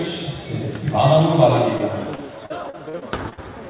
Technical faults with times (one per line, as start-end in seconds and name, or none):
1.78-3.39 repeated packet loss (robotic sound)